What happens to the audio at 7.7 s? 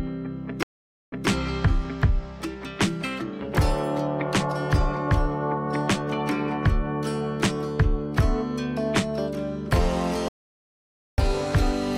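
Nothing goes wrong at 7.7 s; the audio carries on intact through that moment, with no dropout, click or other disturbance.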